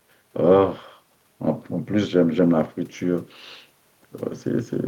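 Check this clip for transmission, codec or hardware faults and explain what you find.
No fault can be heard anywhere in the speech. A close listen across the whole recording turns up nothing to report.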